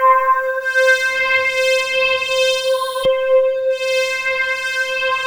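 No technical faults can be heard anywhere in the audio.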